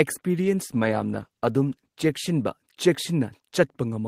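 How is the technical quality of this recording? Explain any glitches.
Quality takes a clear hit for most of the clip. From 0.42 s to 3.49 s the speech turns rough and watery and loses its top end, sounding muffled and smeared before clearing again. This is a call bitrate drop: the call's bandwidth estimate fell, so the encoder went from 32 kbps down to 13 kbps and stayed at that floor for about 1.25 s. With so few bits, Opus coded the speech coarsely and trimmed the high frequencies until the rate recovered.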